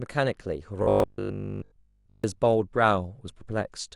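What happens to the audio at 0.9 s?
Robotic sound from repeated short buffers runs from 0.83 to 2.24 s, covering 0.9 s. New audio likely arrived too seldom, so a roughly 20 ms stretch was looped almost continuously. That imposes a rigid 50 Hz metallic buzz over the speech, which only loosely tracks the words.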